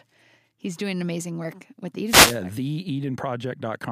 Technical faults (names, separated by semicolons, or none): wireless microphone noise hit